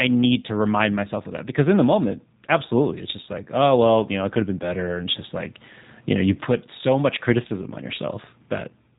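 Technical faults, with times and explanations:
Throughout, G.729 codec: the speech is rebuilt from a vocal-tract filter, pitch predictor and sparse pulses, giving a rough, slightly synthetic edge that fits an 8 kbit/s VoIP stream. The spectrogram shows a hard ceiling at 3.8 kHz, with smeared, pulse-like harmonics below it.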